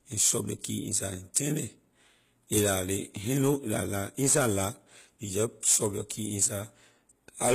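Throughout, the treble sounds gritty and lispy on sibilants, likely from HE-AAC compression at a low bitrate near 20 kbps; a spectrogram shows copied, blocky bands and nothing above 14.9 kHz. Pre-echo appears at 1.34 s, just before "turn it", and at 6.09 s, right after "shove your": codec noise spread across a transform block leaks about 10 to 12 ms ahead of an attack, heard as a short hiss, visible as a smear before the waveform's onset.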